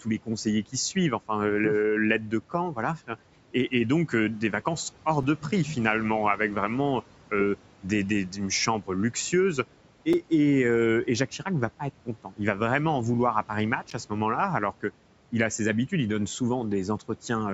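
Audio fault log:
5.23 s, 10.13 s and 13.90 s: block of digital silence. Each is heard as a tick or dip in the speech, with the signal dropping abruptly to silence for about 2.7 ms, 5 ms and 10 ms. The hard cut to silence and back, with no fade, is what gives these gaps their abrupt edges.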